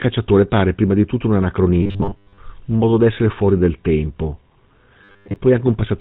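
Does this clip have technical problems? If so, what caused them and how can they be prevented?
Yes. The GSM full-rate codec is audible for the whole clip. Nothing comes through above about 4 kHz, and the speech has the buzzy, gravelly grain of a coder that models the vocal tract and drives it with a coarse, regularly spaced pulse excitation. The damage is plain and points to the 13 kbps full-rate coder. Unlike ordinary band-limiting, which only muffles, this adds a constant rasp to every voiced sound. To prevent it, route the call over a wideband codec such as AMR-WB or Opus instead of legacy GSM.

There is also a robotic sound from repeated short buffers, from 1.83 to 2.39 s, between "prima di tutto un" and "un modo d'essere fuori", and again from 5.04 to 5.36 s. Here the speech turns into a rigid metallic buzz fixed at 100 Hz. That pitch fits a segment of about 10 ms being replayed over and over while most of the real audio in those stretches is skipped, likely because input arrived too seldom. 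The GSM roughness runs through the whole clip and still follows the voice's own pitch. This buzz appears only in those two bursts and holds one fixed pitch. To prevent it, enlarge the jitter or audio buffer, or give the audio thread higher priority.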